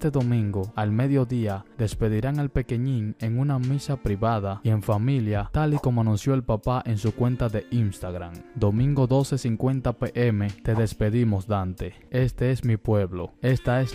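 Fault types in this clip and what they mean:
No fault types turn up in this clip.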